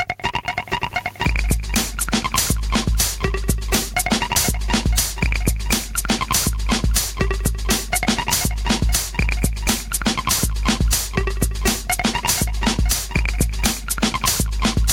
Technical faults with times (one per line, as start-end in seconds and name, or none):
0.00-14.92 gain pumping